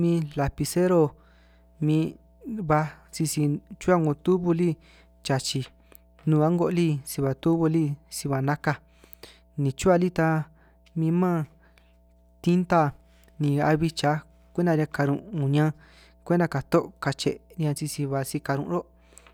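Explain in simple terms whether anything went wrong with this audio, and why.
Something in the recording chain picked up the electricity from the power line, most likely through a ground loop or a transformer sitting close to the cables. That leaked into the signal as mains hum: a steady, low buzzing tone at 60 Hz, with a few overtones above it. Here it runs from the very start to the very end of the speech, sitting quietly underneath it, soft but always present.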